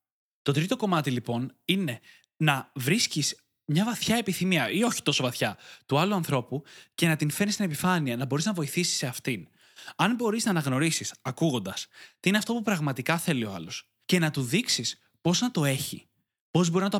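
No technical faults are audible anywhere in this recording.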